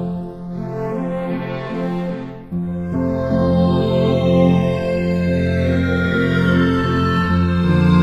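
Channels drifting apart throughout: the two sides run on separate clocks roughly 150 ppm apart, so their offset grows to under a millisecond, and summed to mono the comb notches sweep slowly, heard as flanging.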